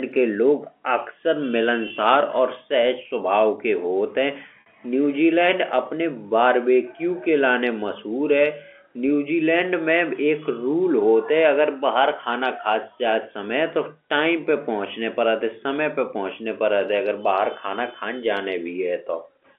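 Packet loss with pitch repetition occurs at 1.88 to 1.90 s and 4.61 to 4.66 s. About 20 ms and 50 ms went missing. The last pitch period repeats as a brief buzzy hold.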